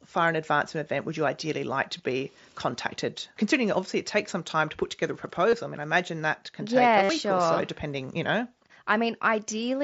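Concealed Bluetooth headset packet loss occurs three times: at 1.98 s after "you ideally like to", for 15 ms; at 5.50 to 5.53 s after "to put together a", for 22.5 ms; and at 7.03 to 7.09 s after "can take yeah a", for 60 ms. Each gap in the mSBC stream is filled by repeating recent waveform. The 60 ms run holds a buzzy tone at full level before warbling back into "sure or so depending".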